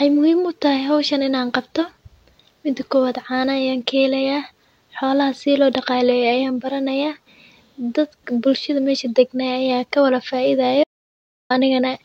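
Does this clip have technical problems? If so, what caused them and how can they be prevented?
Yes. At 10.84 s the speech cuts abruptly to dead silence, with no room tone at all, until 11.50 s, so about 0.67 s is lost. This is an audio dropout to silence, likely from a momentary input loss while the recorder kept writing silence. To prevent it, secure cables and wireless links, check mute states, and monitor input levels while recording.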